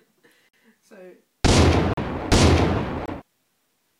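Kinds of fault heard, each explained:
Block of digital silence: runs of samples drop to silence with no fade, leaving three short holes of 46, 39 and 23 ms. The waveform shows near-flat lines, and a spectrogram shows blank vertical stripes.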